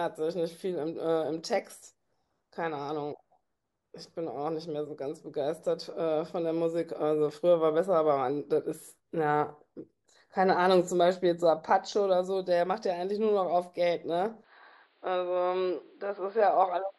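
At 14.44 s the recording input has likely switched to a poorer device, which passes nothing above about 4.9 kHz. From there to the end at 16.99 s the speech turns abruptly dull and boxy, with no gap at the switch, little change in loudness and a faint new background noise underneath.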